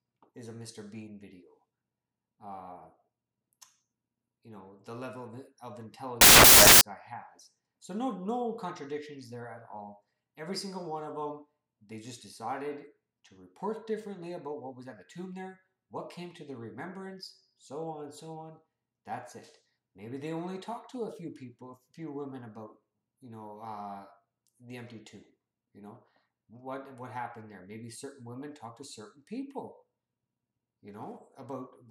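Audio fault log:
6.21–6.81 s, samples built from the wrong bytes: for about 0.6 s the sound gives way to loud, harsh broadband noise because each sample's bytes are being assembled out of order or out of step, so the rapidly changing low bits land in the high positions and swamp the real signal. Unlike an added noise burst, the noise comes from the audio's own samples being misread.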